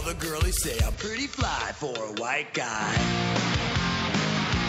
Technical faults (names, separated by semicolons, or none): input switched to a poorer device